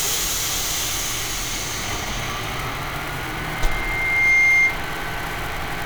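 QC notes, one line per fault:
3.23–4.82 s: loudspeaker feedback squeal. A single tone at 2.1 kHz rises out of the sound and swells over roughly a second into a piercing squeal. It peaks about 10 dB above the surrounding sound, then stops. The microphone is hearing the loudspeaker it feeds. At 2.1 kHz the loop gain tops one, so that frequency keeps reinforcing itself on each pass. It grows until the amplifier limits it or the loop is broken.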